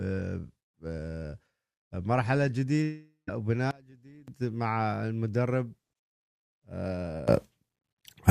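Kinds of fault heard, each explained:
Long network dropout: From 2.83 to 3.29 s the sound smears into a buzzy continuation of the last bit of audio that fades away, leaving roughly 0.13 s of near silence before things pick up again. That's likely a network dropout: about 0.44 s of audio never arrived, so the receiver padded the gap with concealment, and when the stream resumes that stretch of material is simply gone.
Sudden gain jump: Twice the level steps abruptly instead of ramping, with the background noise moving right along with the sound, which points to a digital gain change applied sample to sample. From 3.71 to 4.28 s everything drops by about 24 dB and then snaps back. From 7.28 s to the end it jumps up by about 20 dB and stays there, a likely unramped gain setting or bit shift.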